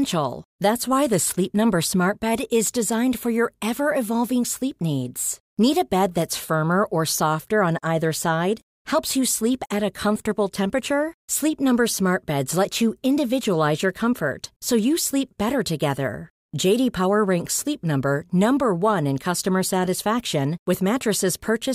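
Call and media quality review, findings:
Listening through the speech recording turned up nothing that stood out.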